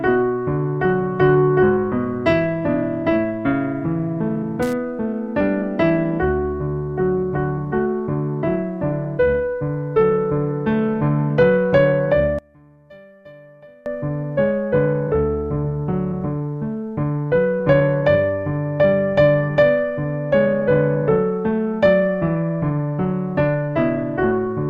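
From 12.39 to 13.86 s the sound suddenly drops by about 27 dB, as if most of it has been scooped out. That's the signature of one channel inverted, likely: one side's polarity is flipped, so when the two channels are summed to mono, everything they share cancels. What survives is just the difference between them, a faint, weak leftover until the full sound snaps back at 13.86 s.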